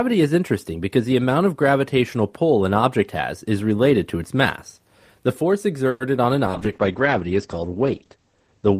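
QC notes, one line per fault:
5.89 to 6.02 s, call audio freeze: just before "on an" the speech stalls for about 0.13 s, and that stretch is filled with a fading continuation of the last sound rather than true silence. This is likely a jitter buffer running dry while packets were held up in transit. Once they arrived, playback picked up exactly where it left off, so nothing is lost, but everything after it now lands about 110 ms later than it should.
6.48 s to the end, call bitrate drop: after "on an" the encoder falls from 32 kbps to 10 kbps and stays there for the last 2.3 s or so. At that rate Opus codes much more coarsely and trims the audio band from 20 kHz down to 8 kHz. That takes the air and sibilance off the top end, leaving the speech muffled and a bit rough and watery until the clip ends.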